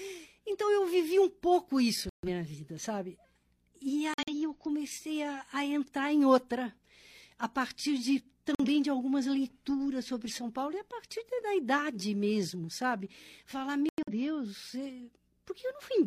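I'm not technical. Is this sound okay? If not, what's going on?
No. The speech drops to sudden silence four times: 2.09 to 2.28 s (after "vivi um pouco isso"), 4.14 to 4.34 s (before "eu comecei a a"), 8.55 to 8.68 s (after "a partir de"), and 13.89 to 14.13 s. This is corrupt frame muted: damaged chunks of the compressed file were rejected and replaced with silence.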